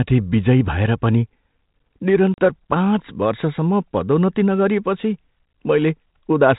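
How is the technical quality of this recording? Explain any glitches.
It's a telephone-band speech recording with one clear dropout; the G.726 ADPCM coding sounds like the 32 kbit/s DECT rate, with a light grit and nothing above 4 kHz.

At 2.34 s there's packet loss on an ADPCM call: about 40 ms, roughly a couple of packets, drops to hard silence. The decoder's predictor and step size lose sync with the sender's, so the speech returns at "पाँच वर्षसम्म पदोन्नती नगरिएपछि" slightly distorted and settles within tens of milliseconds.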